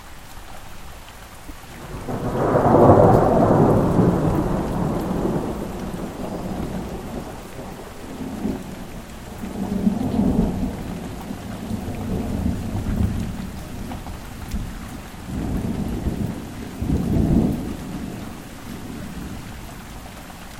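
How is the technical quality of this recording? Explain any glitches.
The recording has three short glitches at about 1.48, 14.93 and 19.01 s, and each lasts roughly 30 ms, about one 26.1 ms MP3 frame. They sound like a brief chirp or hole where the sound skips ahead. The likely cause is a broken MP3 bit reservoir. Frames were dropped, so the next frame reached back for borrowed data and decoded bytes from the wrong frame.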